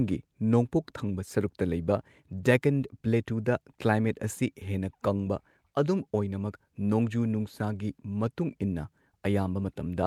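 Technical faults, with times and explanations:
No technical faults can be heard in this speech recording. Nothing in it points to a problem in how the sound was captured, carried or played back.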